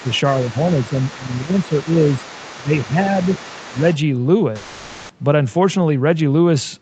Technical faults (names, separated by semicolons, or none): other side's voice leaking through; speech suppressed in double talk; long network dropout